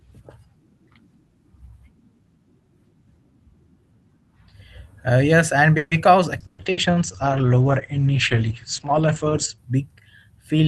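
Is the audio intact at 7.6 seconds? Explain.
No. A call bitrate drop runs from 6.46 to 9.64 s. The Opus encoder falls from 32 to 9 kbps and narrows its bandwidth from 12 kHz to 8 kHz, so the speech sounds muffled and rough. Unlike packet loss, there are no gaps or dropouts.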